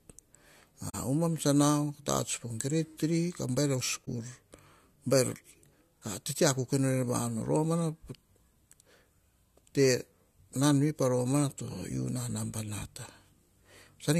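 At 0.89–0.95 s and 4.05–4.08 s, just after "baer o", a corrupt frame concealed: the decoder patched damaged AAC frames, two in the first event and one in the second.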